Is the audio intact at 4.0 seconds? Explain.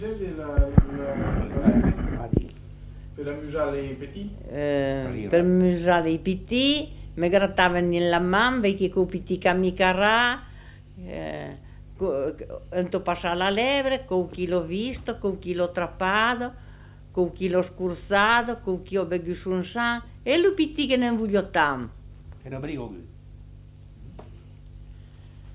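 Yes, at 4.0 seconds the audio runs cleanly with no dropout, click, distortion or other fault to be heard.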